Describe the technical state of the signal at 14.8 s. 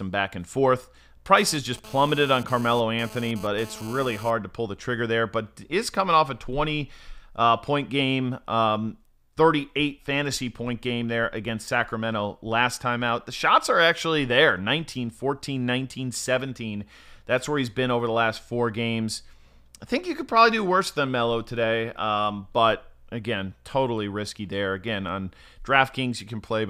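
At 14.8 s the speech signal is intact, with no audible fault at that moment.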